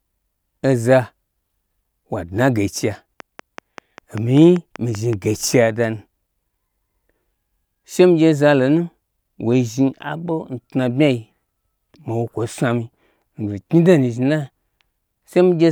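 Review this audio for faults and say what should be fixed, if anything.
A regular ticking runs through the speech from 3.20 to 5.14 s, a train of clicks at about 5.2 per second, roughly ten in all, peaking about 5 dB above the voice. It is likely interference from nearby equipment or a faulty connection or power supply injecting near-identical pulses. To prevent it, keep connections and the power supply stable and move the recording chain away from noisy electrical gear.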